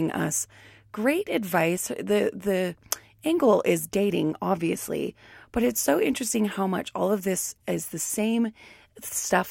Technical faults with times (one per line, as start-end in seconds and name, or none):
none